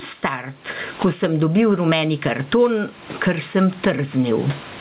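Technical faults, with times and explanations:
Throughout, gain pumping: a swing of around 20 dB that squashes loud and soft parts together; likely the input gain is set too high and a fast limiter keeps pulling it down.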